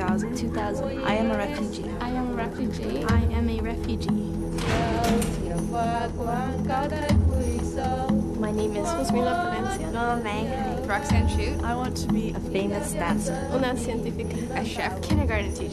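Nothing is technically wrong with the audio; no fault can be heard anywhere in it.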